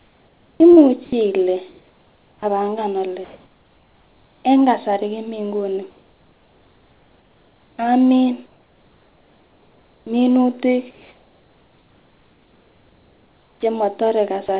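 From 0 to 2.43 s, just before "apanga ole", the sound is chopped by the voice detector, likely flipping repeatedly: about 1.5 s of quiet edges become synthetic fill.

Comfort noise in place of the background follows at 3.25–4.45 s (between "apanga ole" and "en kasari komii nguni"), 5.91–10.07 s, and 10.91–13.63 s. Here the real background is swapped for smooth, featureless hiss, likely sent as comfort noise during discontinuous transmission. In the first, the level stays unchanged, about 39 dB below the loud parts. In the last, it sits about 3 dB quieter.

At 13.61 s the onset is clipped by the voice detector, likely because it triggered late. The first 20 ms of the returning sound are missing, so it starts abruptly with no soft attack, rather than fading in.

At 14.47 s, sound is dropped by the voice detector, likely misjudging quiet material as background. About 10 ms of sound gives way to brief noise before the sound resumes.

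All of this plays through a call path that carries nothing above 4 kHz.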